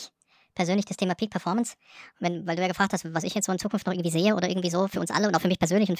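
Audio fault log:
throughout: wrong sample rate. The speech runs about 1.45 times too fast and sits roughly 6.5 semitones high, with speed and pitch rising together. This is consistent with audio captured at 22 kHz being played back at 32 kHz without conversion. On a spectrogram, harmonics and formants sit stretched upward by the same 1.45 factor, and syllables look compressed in time. On the waveform, the envelopes and pauses between phrases are correspondingly shorter.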